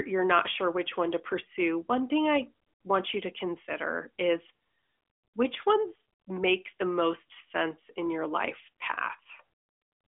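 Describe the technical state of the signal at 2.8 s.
At 2.8 s the signal is intact with no fault, the speech passing through the AMR narrowband mobile codec as a band-limited phone-line sound with nothing above 3.6 kHz.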